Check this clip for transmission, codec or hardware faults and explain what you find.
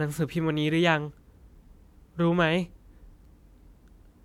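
Nothing stood out on listening to this speech recording; it gives no sign of any transmission, codec or hardware problem to report.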